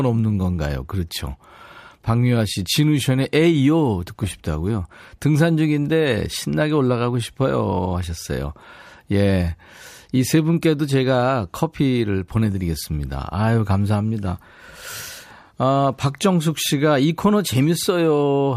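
A speech recording with periodic USB or driver dropouts between 14.47 and 17.53 s: about four ticks, evenly spaced at 1.02 s. Each one is a tiny gap, well under a millisecond, where samples are skipped rather than replaced with silence, so the waveform jumps and clicks while speech is present. The regular spacing points to a background task stalling the USB bus or audio driver on a fixed schedule.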